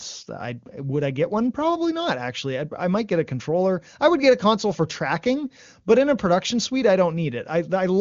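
No technical faults occur at any point in the speech, which comes through the AMR wideband (HD Voice) codec at 23.85 kbit/s.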